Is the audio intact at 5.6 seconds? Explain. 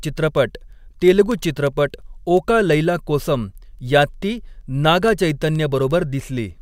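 No, 5.6 s sits inside a run of word clock ticks from 0.14 s to 6.62 s. The receiving clock drifts from the sender's by something like 200 ppm, so a sample slips each time they cross, giving sharp, uneven ticks roughly every tenth of a second.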